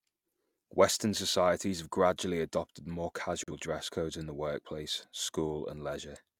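At 3.44 s the speech cuts out in a digital broadcast dropout, returning by 3.52 s. The receiver muted after a bad or missing frame. About 43 ms of audio is simply gone, which fits a single lost frame. It sounds like a brief, clean hole.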